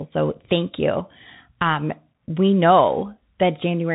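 Speech that sounds muffled and scratchy throughout, with a granular hiss and nothing above 3.8 kHz, pointing to a Bluetooth CVSD headset codec, whose one-bit slope coding fits a 64 kbps link.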